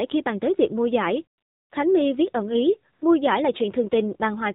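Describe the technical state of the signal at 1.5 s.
At 1.5 s the signal is in a stretch of AMR comfort noise running from 1.38 to 1.72 s, just after "tới việc mua giải". For those 340 ms the phone treated the talker as silent and stopped sending speech frames. The receiver filled the gap with synthetic noise built from a rough sketch of the background's level and spectral shape. The result is a smooth, steady hiss that switches in and out. On a spectrogram it shows as a flat, featureless band with abrupt edges at both ends, and on the waveform as a uniform low-level noise floor with no structure.

That moment also carries the AMR narrowband mobile codec damage present across the whole clip. Everything is squeezed into an 8 kHz-sampled channel, so nothing above 4 kHz survives, and the spectrogram shows a hard ceiling with empty space above it. The speech is modelled as a vocal-tract filter excited by a few pulses per subframe, and the damage is plainly audible: buzzy, synthetic-sounding speech that points to a low bitrate mode, consistent with about 7.4 kbps.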